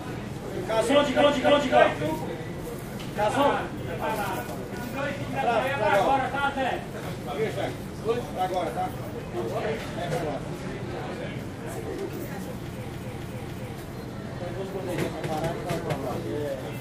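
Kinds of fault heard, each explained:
Repeated frames: a 0.28 s compressed block plays again, twice more at 1.16 s and three more times at 12.87 s. The sound stutters and lengthens.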